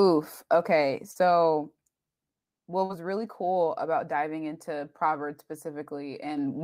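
At 1.11 s and again at 2.85 s the speech briefly smears: short concealed packet loss. Each time about 40 ms of audio arrived too late, and the decoder extended the preceding sound before crossfading back. On a spectrogram each shows as a short stretch of flattened, repeated harmonics or hazy noise. The waveform's detail goes uniform there.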